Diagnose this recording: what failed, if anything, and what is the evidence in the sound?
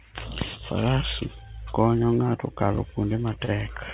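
The failure sits at the network and jitter buffer stage: a short stall from a late packet, right near the end of this speech clip, from 3.45 to 3.51 s. A packet missed its slot, the buffer ran dry, and the receiver stretched the last bit of sound by about 33 ms until the data showed up, then carried on where it left off. Nothing is lost, but that sound hangs a touch long with a faint buzzy dip, and playout now runs 33 ms later. The band-limited, nothing-above-4 kHz sound of the G.711 A-law call path runs throughout.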